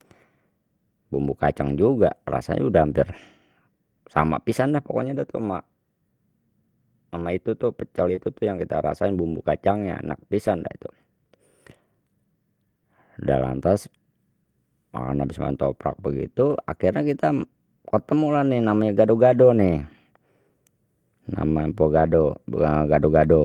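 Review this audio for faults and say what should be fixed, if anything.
Short concealed packet loss occurs at 8.15 to 8.19 s. About 20 ms of audio never arrived in time. The receiver covered the hole by extending the preceding sound for 17 ms, following its pitch where voiced and using shaped noise where not, then faded back into real audio. The result is a brief smear or wobble, and a short consonant there may be lost. Better jitter buffering and a steadier network path would prevent it.

Lost packets rebuilt from error correction occur at 8.17 to 8.19 s, 10.46 to 10.48 s and 21.98 to 22.00 s. Each event is a single 20 ms frame. The next packet carried a low-bitrate backup copy, and the decoder played that instead of leaving a gap. Those moments sound rougher and noisier than the surrounding speech. The first overlaps the concealment event. Reducing packet loss on the network would prevent them.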